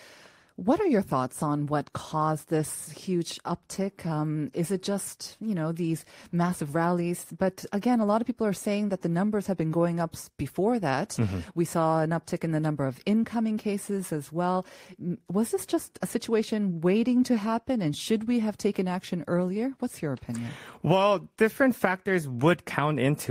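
No technical faults turn up anywhere in the recording, so there is nothing to list in time order.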